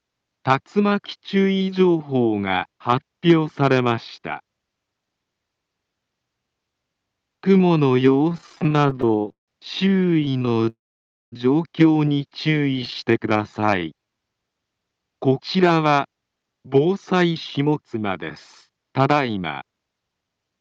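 From 8.29 to 9.50 s, then 9.88 to 10.69 s and again 12.74 to 12.96 s, there are repeated stalls (stutter). Packets kept showing up late, so the receiver kept stretching the last bit of sound to cover the gaps, up to 163 ms in the first stretch, and the audio drags and judders. Right after, at 10.69 to 11.34 s, there's a call audio freeze, likely from packets held up in transit: a gap of about 0.6 s, mostly silence, before the sound carries on where it stopped. From 12.80 to 14.18 s a jitter buffer slow-down repeats tiny slices to rebuild its reserve, running at 91% speed with the pitch unchanged, so things sound drawn out. Then come two jitter buffer speed-ups, 15.55 to 18.09 s at 110% and 18.70 to 20.59 s at 112%, trimming roughly 0.3 s and 0.2 s so the sound feels hurried.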